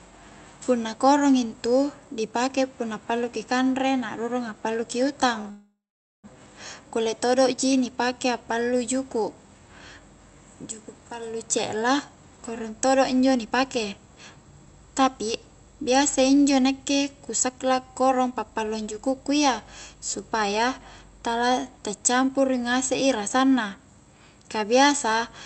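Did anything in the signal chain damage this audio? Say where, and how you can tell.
Yes. At the network and jitter-buffer stage, a short stall from a late packet occurs right after "na a'rurung pallu ki", between 5.41 and 5.46 s. A packet missed its playout time and the buffer ran dry, so the receiver stretched the last sound by about 28 ms until the data arrived. The result is a syllable held slightly too long with a faint buzzy smear, and then the speech resumes where it stopped.

Immediately after, from 5.50 to 6.26 s, there is a call audio freeze. The last sound carries on as a fading buzz, then drops to roughly half a second (about 480 ms) of silence before speech picks up again with nothing skipped. About 735 ms has been inserted in total. The likely cause is a longer burst of delayed packets that emptied the jitter buffer, forcing the receiver to fill the wait with concealment.

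Later, the jitter buffer speed-up shows as hurried delivery at an unchanged pitch. The first run is from 11.76 to 15.32 s at 110% speed, between "juku' pallu" and "biasa injo nakke ku". The second, from 17.31 to 20.16 s at 112%, follows "biasa injo nakke ku". A brief third runs from 21.98 to 22.38 s at 108%. The buffer had built up excess delay and trimmed it by cutting one or a few pitch periods at a time, repeatedly: roughly 0.4 s in each long run and a few tens of milliseconds in the short one.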